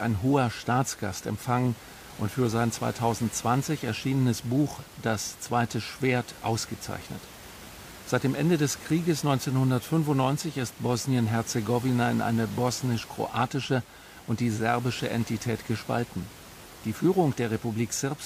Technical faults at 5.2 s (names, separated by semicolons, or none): none